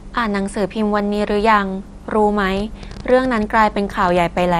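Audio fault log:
Throughout: MP2 compression, likely. The sound is dull with a gurgling, granular texture, and nothing is present above 14.3 kHz. Upper sub-bands are switched off and the remaining ones are coarsely quantised, which fits a low bitrate of around 64 kbps.
2.57 to 4.41 s: train of clicks. About twenty similar pulses tick over the sound at an irregular pace, averaging 9.3 per second, with peaks roughly at the level of the speech. This is likely interference from nearby equipment or a faulty connection or power supply.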